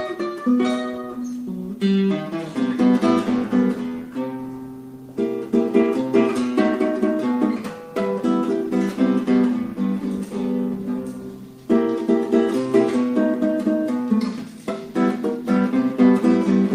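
Nothing in this recording calls for attention, as there's no technical fault anywhere in it to point out.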